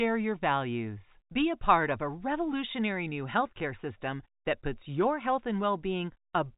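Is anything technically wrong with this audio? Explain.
No, nothing in this speech recording stands out as a technical problem. It has the narrow sound of G.711 telephone coding, with nothing above 4 kHz and only a faint quantisation hiss that rises and falls with the voice.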